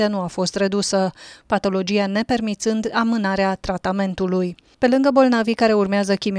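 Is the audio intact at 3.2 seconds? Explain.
Yes, the audio is intact at 3.2 seconds, with no dropout, click, distortion or other fault at that point.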